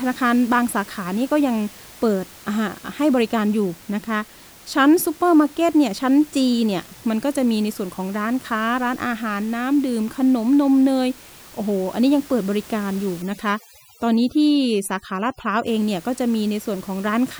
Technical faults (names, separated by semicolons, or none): overdone noise removal